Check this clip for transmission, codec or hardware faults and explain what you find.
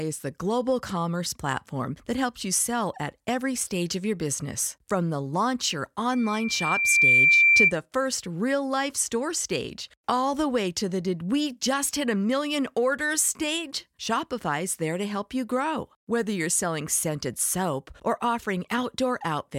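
One fault stands out in the speech: loudspeaker feedback squeal from 6.12 to 7.73 s. A single 2.4 kHz tone swells over roughly a second to about 10 dB above the speech, as the microphone re-amplifies its own loudspeaker. Its self-building rise separates it from a steady interference whine.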